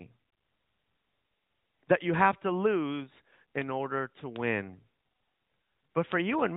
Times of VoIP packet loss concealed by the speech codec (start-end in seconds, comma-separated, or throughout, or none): none